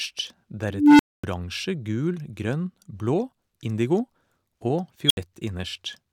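At 0.70 s an unstable filter takes over the speech. A recursive filter with bad coefficients feeds back on itself, and a low hum near 300 Hz swells over 292 ms until it clips. The numbers then overflow, and about 244 ms of silence follows until the filter resets at 1.24 s. The growing tone sets it apart from a plain dropout.

At 4.62 s an underrun with held sample flattens the waveform for 1.33 ms. This fits a 64-sample buffer running empty while the converter holds its last value. About a millisecond and a half of live audio is lost.

At 5.07 s the unstable filter fault returns as a high squeal near 3 kHz. It builds in just 34 ms before cutting to about 70 ms of silence, ending at 5.17 s.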